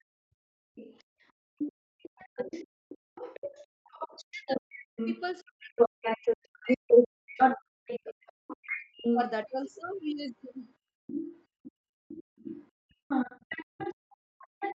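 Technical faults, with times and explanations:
0.0 s, 2.17–3.07 s and 4.26–8.48 s, speech suppressed in double talk: the talker's level falls sharply, by roughly 40 dB at its deepest, in brief bites and then for most of the long stretch from 4.26 s, with a few seconds affected there in total. The likely cause is the echo canceller's suppressor treating the near talker as echo while the far side was also active, so it attenuated both and left the speech dipping and broken.
0.32–1.89 s, 3.67–3.84 s and 10.79–14.78 s, background gated by the echo canceller: the room sound drops by about 30 dB while loudspeaker playback is present, for about a second in the first span, a short 150 ms dip at 3.67 s, and again in the span from 10.79 s to the end. The canceller clamps the microphone gain during far-end activity and releases it afterwards, so the ambience drops out and returns.
0.75–14.78 s, other side's voice leaking through: a second voice remains audible alongside the talker from 0.75 s to the end, at roughly 5 dB relative to the main speech. 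The likely cause is incomplete echo cancellation, letting loudspeaker output picked up by the microphone pass on. It sits within the same 8 kHz band as the rest of the call audio.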